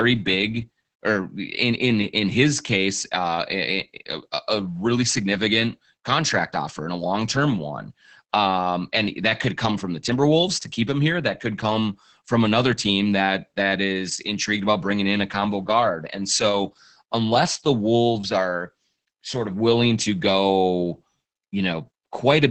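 Opus voice compression affects the whole clip. Content stops near 8.7 kHz, so the highs are muffled, and the linear-prediction coder's coarse excitation makes the speech hoarse and slightly robotic. The heavy damage fits wideband SILK mode at roughly 10 kbps.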